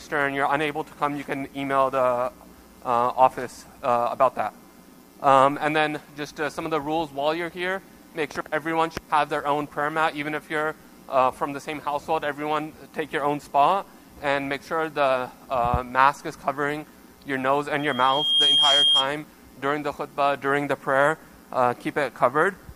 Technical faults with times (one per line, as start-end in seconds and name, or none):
17.79-19.13 loudspeaker feedback squeal